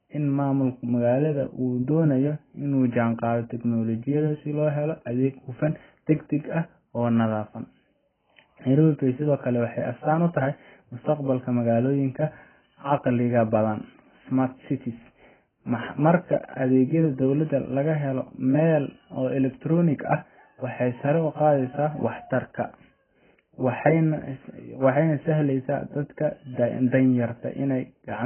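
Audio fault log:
throughout, AAC compression: the sound stops dead above about 3.1 kHz, with a smeared, warbling texture and fizzy sibilants, likely from AAC-LC coding at a very low bitrate, around 12 kbps. The abrupt cut-off and heavy artefacts distinguish it from a smooth treble roll-off.
22.61 s to 28.25 s, de-emphasis applied wrongly: a treble cut for pre-emphasis that was never there dulls and muffles the last stretch, sloping smoothly down to about 10 dB lower at 10 kHz than at 1 kHz. It is a gradual tilt, not a brick-wall edge or codec warble.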